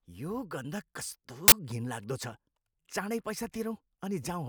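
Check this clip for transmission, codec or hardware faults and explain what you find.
One fault: an uninitialised buffer at 1.48 to 1.52 s, right after "यो गन्ध कस्तो". A 40 ms block played before any audio reached it, so stale memory became samples: a short, loud burst of digital noise. Unlike a dropout, it adds harsh noise rather than silence.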